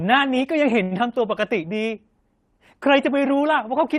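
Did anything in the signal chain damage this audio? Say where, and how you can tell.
Yes. At the network stage, a short stall from a late packet hits the speech at 0.83 to 0.94 s. The jitter buffer ran dry, so the receiver held the last sound for about 76 ms with a slight buzz or dip, then resumed without losing anything, leaving playback 76 ms later.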